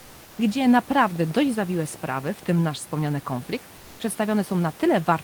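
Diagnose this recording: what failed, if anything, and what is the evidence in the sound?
Comfort noise in place of the background at 0.00 to 0.37 s and again at 3.77 to 3.99 s, just after "nasz wspomniany konflikt", at the codec stage. In both gaps the room noise, which sits about 25 dB below the speech, gives way to a steady, featureless hiss about 27 dB below the loud parts, about 1 dB quieter in the first gap and at the same level in the second. The likely cause is discontinuous transmission: the sender stopped coding during the pauses and the receiver synthesised noise to fill them.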